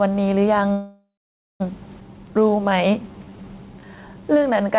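Throughout the clip there's gain pumping: the level swings by a few decibels, with the background rising in the gaps and ducking under each louder stretch. The likely cause is a gain set too high, with a fast limiter or compressor clamping down on every peak.

At 0.72 s the audio stalls until 1.62 s, a call audio freeze. The last sound hangs on as a fading buzz and then drops to silence for about half a second. That's likely a jitter buffer that ran dry while packets were held up. When they arrive, the audio resumes right where it stopped, so a gap has been added but nothing is lost.

At 2.00 to 2.03 s there's a skip ahead. Around half a second of audio is dropped and the two sides are butted together with only a tiny join, so the speech jumps abruptly forward.

From 2.13 s to 4.76 s a jitter buffer slow-down kicks in. The receiver repeats single pitch periods and bits of pauses to rebuild its reserve. 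Speech runs at about 88% speed at unchanged pitch, stretched by roughly 0.31 s overall. This sits on top of the band-limited sound of the G.711 call path, which has nothing above 4 kHz.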